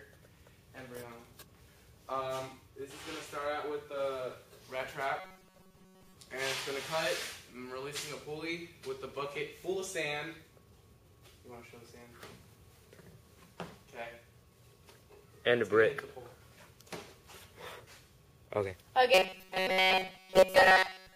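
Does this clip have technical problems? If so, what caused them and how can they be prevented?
Yes. From 5.2 to 6.14 s, and again from 19.14 s to the end, the sound becomes a rigid metallic buzz at 188 Hz. This is robotic sound from repeated short buffers, likely caused by audio arriving too seldom, so a roughly 5 ms block repeats in place of most of the real audio. Giving the audio path enough buffer headroom prevents it.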